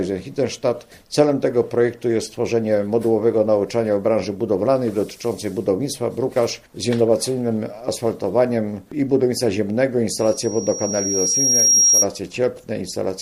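A microphone hearing its own loudspeaker causes loudspeaker feedback squeal: a 5.6 kHz tone swelling from 10.18 to 12.08 s to roughly 5 dB above the sound.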